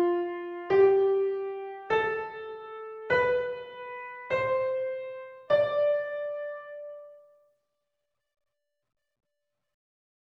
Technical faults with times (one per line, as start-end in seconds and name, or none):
none